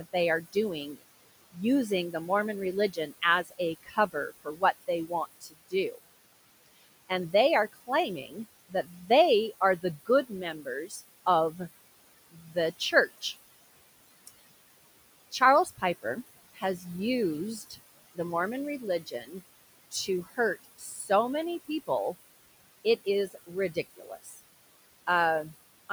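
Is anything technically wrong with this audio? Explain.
Yes. Noise suppressor artifacts run throughout the speech: the suppressor pulls steady background down by about 19 dB frame by frame, leaving a residue that appears as patchy, flickering speckle between words on a spectrogram. The room noise, about 17 dB below the speech, is pumped by this gating.

Speech cut by the noise suppressor occurs from 0.0 to 13.24 s, 15.31 to 21.89 s and 22.85 to 25.9 s. The suppressor mistakes soft consonants and word endings for noise and drops them by up to about 20, 18 and 14 dB respectively, roughly three seconds, one and a half seconds and half a second in total. They sound swallowed, and the waveform shows clipped-looking tails and faint high-frequency consonant energy missing from the spectrogram.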